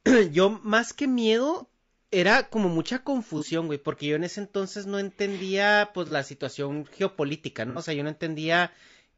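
The speech has been squeezed through a short-frame codec, likely low-delay AAC compression of the AAC-ELD kind used in video calls, at a rate that fits roughly 32 kbps. Its brief analysis frames cannot separate the voice's pitch harmonics cleanly, and too few bits are left for the detail, so the damage is plainly audible throughout: the voice sounds rough and grainy, noise fills the gaps between harmonics, and the top band has a thin, synthetic quality.

AAC frame loss with concealment happens three times. At 3.38 to 3.43 s and again at 6.08 to 6.13 s, about 30 ms of audio goes missing, which fits a single lost frame. The decoder patches each gap from the last good spectrum, leaving a short smeared, noisy blip. At 7.70 to 7.79 s the loss runs about 60 ms, which fits two lost frames, and the guessed fill is longer.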